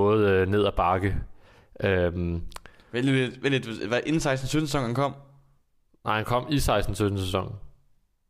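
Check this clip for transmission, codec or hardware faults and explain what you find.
Nothing in this speech recording stands out as a fault, so there's nothing to walk through here.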